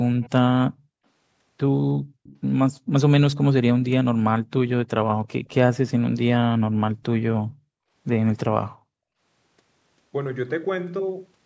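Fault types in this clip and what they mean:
Echo leak: The far end's echo canceller likely failed to fully suppress what its microphone picked up from a loudspeaker playing the call, so part of that sound was sent back. In this speech clip it shows as two brief, faint repeats of the talker trailing about 315 ms behind, roughly 25 dB below the direct voice, at 0.21 to 0.3 s and 2.24 to 2.4 s, each a short scrap.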